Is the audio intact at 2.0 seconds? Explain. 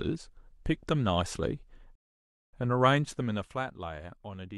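No. At 2.0 seconds the speech is inside a rebuffering stall that runs from 1.95 to 2.53 s. The player used up its downloaded audio and had to wait for more to arrive. The speech cuts abruptly to silence, then picks up exactly where it stopped. No speech is lost. Instead, the pause adds about 575 ms to the clip, so everything after it arrives that much later.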